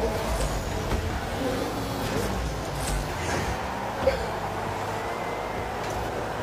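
Two short glitches, each about 50 ms long, break into the sound at 2.00 s and again at 4.23 s. Both come from damaged data in a compressed stream: the decoder hits corrupted frames, loses sync and skips ahead to the next valid frame header.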